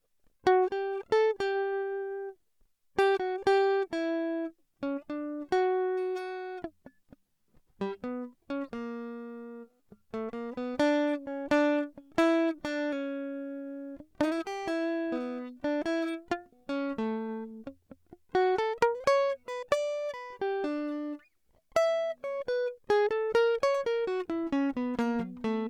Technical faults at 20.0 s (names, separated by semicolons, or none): none